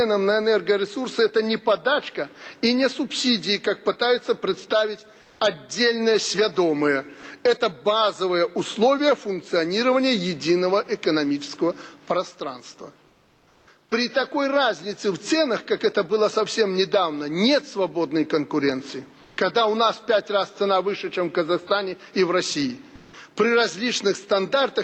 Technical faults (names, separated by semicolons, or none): comfort noise in place of the background